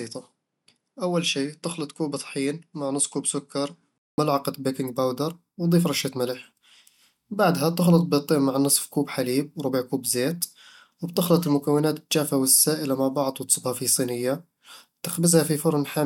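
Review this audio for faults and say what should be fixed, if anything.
From 0.0 to 4.18 s the speech sounds duller and somewhat quieter, by roughly 5 dB. Nothing is present above 11.1 kHz. A faint new background noise sits far below the speech, around 55 dB down. At 4.18 s a 0.2 s silence occurs, and then the sound opens up to full bandwidth and level. The likely cause is an input switched to a poorer device, with the system moving from a narrower-band microphone to the intended one. To prevent it, lock the input device before recording starts and disable automatic device switching.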